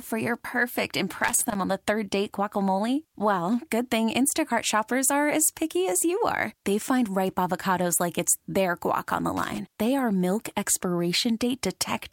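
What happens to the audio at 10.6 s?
Nothing goes wrong at 10.6 s; the speech carries on intact through that moment, with no dropout, click or distortion.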